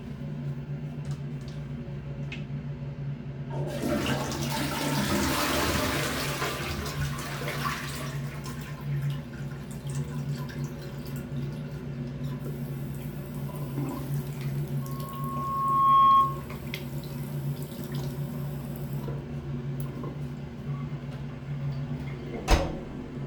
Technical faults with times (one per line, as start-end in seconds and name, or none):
14.81-16.47 loudspeaker feedback squeal